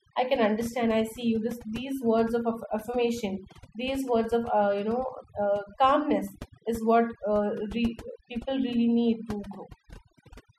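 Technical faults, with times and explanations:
Throughout, overdone noise removal: the noise reduction was pushed so hard that frequency bands near its noise estimate are pulled far down or cut entirely. Softer parts of the speech vanish with them, leaving near-silent gaps flecked with twinkling specks.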